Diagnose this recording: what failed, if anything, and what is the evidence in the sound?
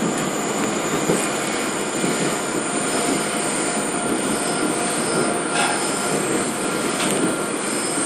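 The codec stage is where this failed: the damage runs through the whole recording and is most likely MP2 compression. Nothing sounds above 14.4 kHz, so the top is dull, and the remaining highs carry a gurgling, granular roughness as upper sub-bands drop in and out and the survivors are quantised coarsely. The degree of damage fits a low bitrate around 64 kbps. A plain low-pass filter would dull the sound cleanly without the flickering, grainy texture.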